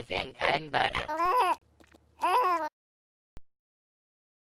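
At 1.26 s a DC step shifts the waveform's zero line abruptly, giving a low thump; the offset then decays away, as through a high-pass near 5 Hz. At 1.58 s a digital broadcast dropout mutes the sound for 32 ms, consistent with one lost frame, before it resumes. A second identical DC step thumps at 3.37 s.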